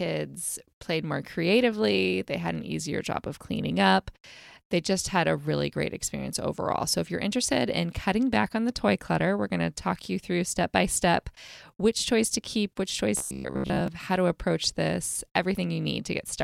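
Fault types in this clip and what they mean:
Robotic sound from repeated short buffers: between 13.17 and 13.88 s, after "toys to keep which" and before "how to approach this", the speech collapses into a rigid metallic buzz at 66.7 Hz that still roughly tracks the phrasing. Most of that stretch is looped rather than real audio, and the fixed pitch fits a segment of about 15 ms being replayed, likely because fresh audio arrived too slowly and the playback filled the gap.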